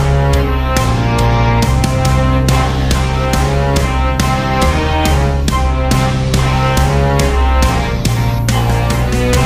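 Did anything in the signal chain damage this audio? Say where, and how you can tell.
No, nothing anywhere in the chain from capture to playback audibly damaged this audio.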